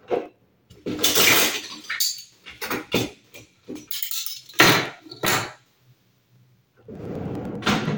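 From about 0.06 s right through to 7.86 s there's a steady tick every 0.1 s, ten a second, which points to periodic USB or driver dropouts. Something keeps stalling the audio path, and each time roughly a millisecond gets blanked to silence. That's around seventy small clicks, audible wherever the sound is present.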